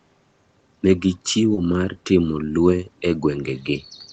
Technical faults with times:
1.54-1.58 short concealed packet loss

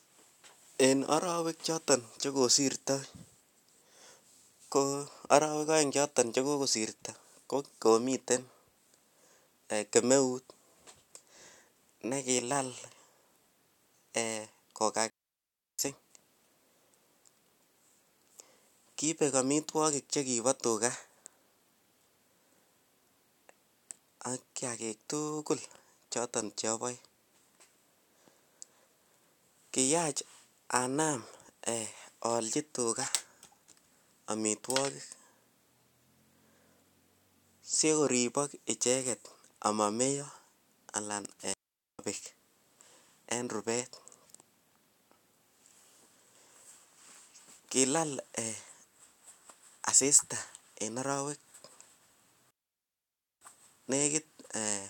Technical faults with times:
15.10-15.79 digital wireless dropout
41.53-41.99 digital wireless dropout
52.51-53.41 digital wireless dropout

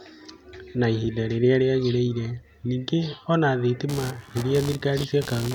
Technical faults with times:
3.89-5.55 computer activity noise

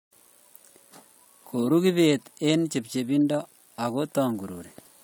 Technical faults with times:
none

